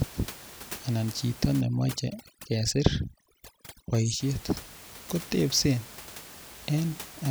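From 1.61 s to 4.2 s the speech goes through overdone noise removal. The noise reduction is set far too strong. It pushes individual frequency bands down hard whenever they sit close to its noise estimate. Quiet parts of the speech fall below that line and vanish with the noise. The room noise, about 18 dB under the speech, drops and breaks up into twinkling specks.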